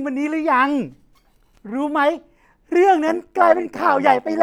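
Windowed frames were recombined with an overlap that doesn't sum to constant gain, so from 3.08 s to the end overlap-add ripple pumps the speech about 11 dB, a metallic buzz around 100 Hz.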